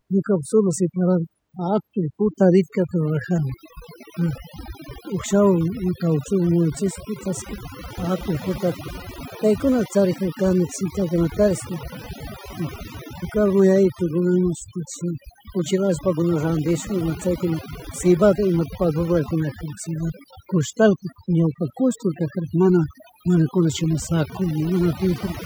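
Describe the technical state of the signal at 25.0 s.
At 25.0 s you're still hearing the overdone noise removal that runs through the whole clip. The denoiser's set too hard, so it knocks out any band sitting near its noise estimate, leaving near-silent gaps with twinkly specks, and quiet parts of the voice go with them.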